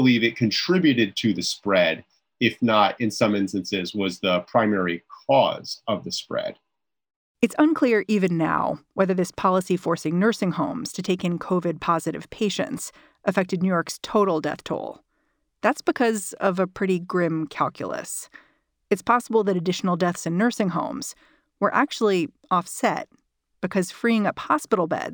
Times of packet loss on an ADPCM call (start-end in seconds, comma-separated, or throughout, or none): none